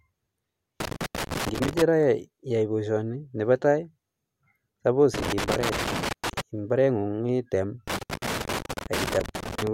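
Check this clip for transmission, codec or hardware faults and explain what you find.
There's a hardware fault here: loose connector crackle, in three bursts. The first runs from 0.80 to 1.82 s, ending just before "ra iyae boisioni nebo"; the others are at 5.14 to 6.41 s and 7.88 to 9.67 s. A worn or dirty contact is making and breaking as it shifts, so the speech gets chopped on and off, and any DC on the line snaps in as pops. You hear it as ragged, irregular scratching over the speech.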